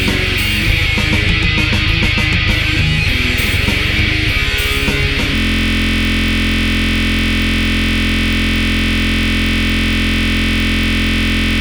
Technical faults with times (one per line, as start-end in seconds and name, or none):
5.35-11.61 system hang loop